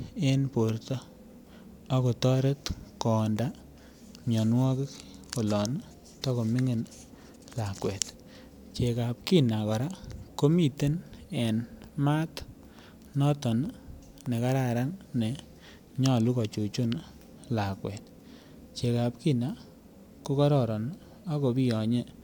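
Listening to this speech recording, nothing stood out as a technical fault at any point.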